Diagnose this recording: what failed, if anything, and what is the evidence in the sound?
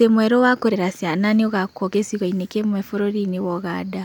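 The codec stage failed: damaged data in the compressed stream gives a short glitch at 0.72 s, where the decoder misread corrupted frames, lost sync and hunted for the next header.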